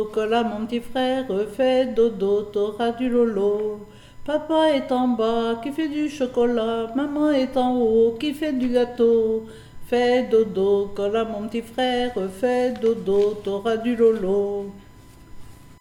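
A steady whine at 1 kHz runs through the whole recording, sitting roughly 40 dB below the programme, and it is USB whine. The USB bus draws current in 1 ms frames, and that 1 kHz pulsing leaks into the audio through shared power or ground. Its pitch fixes it to the bus rather than mains hum, which would sit at 50 or 60 Hz and their harmonics.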